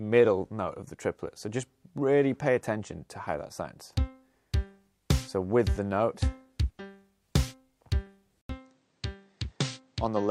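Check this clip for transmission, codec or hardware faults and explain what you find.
One fault is present, at the end of the clip. From 8.41 s to the end, the input was likely switched to a poorer device with a narrower passband and its own circuitry. After an 80 ms silence, the sound dulls with nothing above 8.8 kHz, drops about 5 dB, and gains a new noise floor about 45 dB below the signal.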